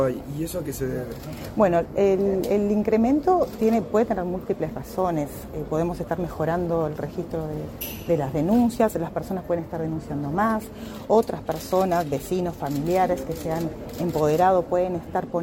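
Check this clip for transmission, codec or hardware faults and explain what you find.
No transmission, codec or hardware faults.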